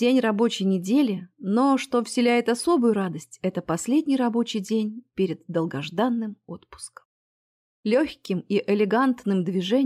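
No technical faults occur at any point in the clip.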